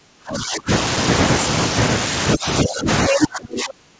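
From the start to 0.7 s the talker's voice is pulled way down, about 35 dB at its deepest, then again more gently, about 15 dB, from 2.35 to 2.88 s, and hard once more from 3.09 s to the end. That's likely speech suppressed in double talk, with the echo canceller ducking both sides while they overlap.

Right inside that last dip, from 3.11 to 3.27 s, a second voice breaks through at roughly the same level as the talker. It's the other side's voice leaking through, likely loudspeaker echo the canceller didn't fully strip from the mic. The whole call sits in a band topping out around 8 kHz, which fits a wideband call codec.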